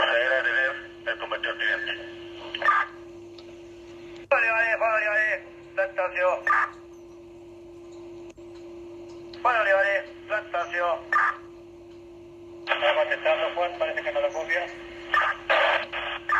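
No technical faults can be heard anywhere in the audio.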